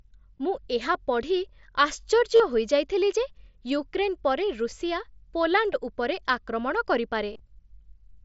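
Concealed Bluetooth headset packet loss hits the speech at 0.38, 2.36 to 2.40, 4.71, 5.73 and 7.33 to 7.39 s. Packets between headset and phone were dropped. The receiver filled each gap by repeating the closest-matching recent stretch of waveform. The single-frame gap at 5.73 s, before "ଉପରେ ଆକ୍ରମଣ", is nearly hidden. The 37.5 ms gap before "ହୋଇଯାଇଥିଲି ଯେ ୟୁକ୍ରେନ୍ ପରେ" holds a short buzzy tone. After "ଉପରେ ଆକ୍ରମଣ", 45 ms of losses spread over 60 ms add a faint warble.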